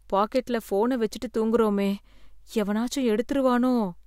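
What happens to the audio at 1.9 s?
Nothing goes wrong at 1.9 s; the speech carries on intact through that moment, with no dropout, click or distortion.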